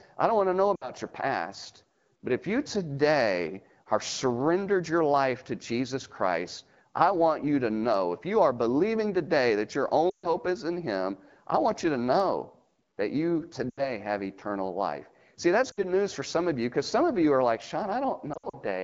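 Lost AMR speech frames break the speech five times: after "don't want to know" at 0.75–0.91 s, after "believing today that your" at 10.10–10.29 s (about 140 ms concealed), after "to know that you" at 13.69–13.96 s, at 15.71–15.84 s, and scattered over 18.34–18.55 s. The decoder repeats its last settings with falling gain, so sound smears and fades. On a spectrogram, harmonics flatten into stretched bands that darken toward silence, and the waveform envelope tapers before recovering.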